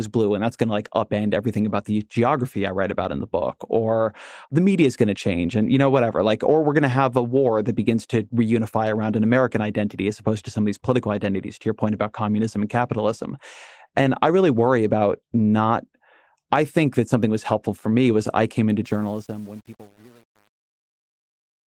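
Right after "was I came into", from about 18.85 s to the end at 21.68 s, the fade-out carries truncation distortion. The gain stage is dropping bits without dither, which fits roughly an 8-bit path, so as the level sinks the waveform collapses into coarse square steps. From about 19.05 s onward it turns gritty. The light Opus coding underneath doesn't cause any of this.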